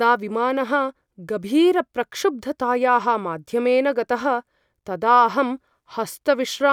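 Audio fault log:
No audible faults were found in the speech at any point.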